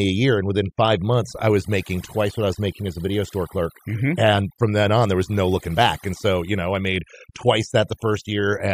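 Throughout, the speech sits over near-silent, twinkling gaps: overdone noise removal, where aggressive band-by-band gating stripped quiet speech along with the noise.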